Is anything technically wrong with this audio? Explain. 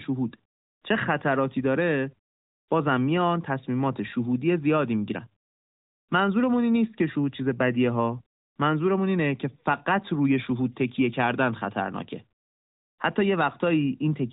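No, nothing is technically wrong: the speech comes through the narrowband mobile path intact, with no dropouts, clipping, level jumps or other disturbances anywhere in the signal.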